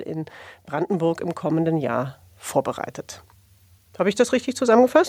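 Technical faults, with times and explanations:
0.08 to 2.52 s, automatic gain rising: the level climbs steadily by about 6 dB over roughly two and a half seconds. The automatic gain control judged the incoming speech too quiet and raised its gain in small steps rather than all at once. Because the gain sits ahead of everything, the background noise swells up together with the speech, which is why the whole sound gets louder rather than just the voice.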